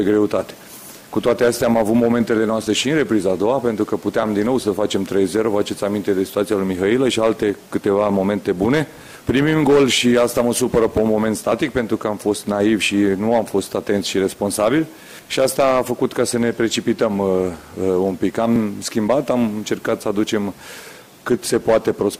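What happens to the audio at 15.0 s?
Nothing goes wrong at 15.0 s; the audio carries on intact through that moment, with no dropout, click or other fault.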